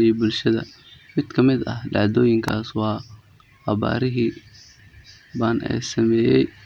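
At 2.48 s a single sharp snap cuts across the speech, a brief and fairly loud click peaking around -10 dBFS. This is an electrical switching spike, most likely a nearby switch, motor or static discharge arcing once and coupling into the audio line.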